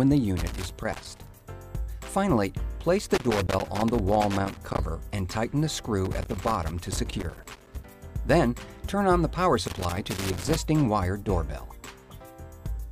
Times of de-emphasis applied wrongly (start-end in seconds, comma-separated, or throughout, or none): none